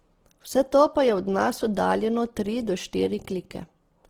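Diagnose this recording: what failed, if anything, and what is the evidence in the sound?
The failure is at the codec stage, most likely Opus compression, and it runs through the whole speech clip. Tones sound rough and grainy, with noise-like fill in place of clean harmonics, yet full bandwidth stays. That fits the music-mode coder starved of bits, near 16 kbps.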